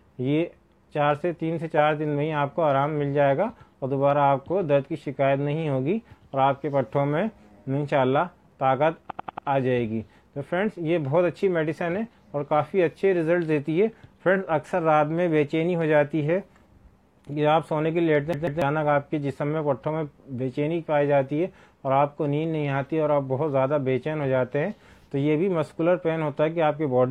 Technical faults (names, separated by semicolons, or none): repeated frames; CD stuck on one turn